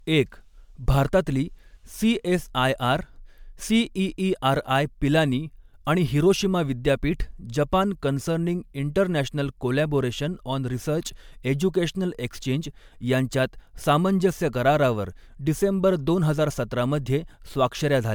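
Throughout the speech there is a swirly, hollow smear with blurred attacks, likely generation loss from about four successive MP3 encodes at roughly 128 kbit/s.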